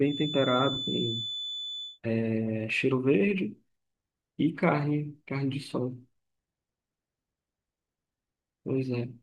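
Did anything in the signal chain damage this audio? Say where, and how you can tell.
Yes. A feedback whistle, a thin steady 3.5 kHz tone swelling and fading slowly in level, sits roughly 10 dB under the speech from 0.0 to 2.0 s. It likely comes from the acoustic loop between loudspeaker and microphone, held just below the point where feedback runs away.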